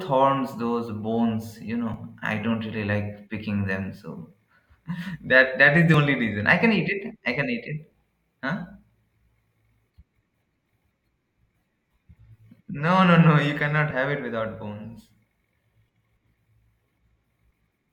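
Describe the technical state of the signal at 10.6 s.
At 10.6 s the speech signal is intact, with no audible fault at that moment.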